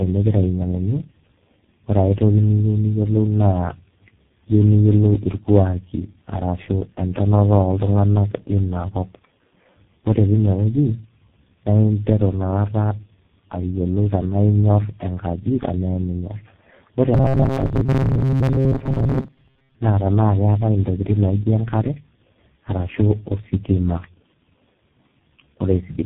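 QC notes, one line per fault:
Throughout: tandem speech coding. The speech sounds rough, muffled and a bit warbly, and that stacked damage points to a chain of about four low-rate speech codecs in a row, ending in something like G.723.1. Each link decodes and re-encodes what the previous one already mangled, so the losses compound and the result is worse than any single codec would give.
17.14 to 19.76 s: robotic sound from repeated short buffers. Between "tenaa eminyorr ore" and "naa tenaa keetai" the speech turns into a stiff metallic buzz at 133 Hz that only loosely tracks the words. That's likely the playback side repeating a tiny chunk of roughly 7.5 ms, which fits a 133 Hz buzz, while fresh audio arrives too slowly. Most of the stretch is repeats, so real speech gets skipped.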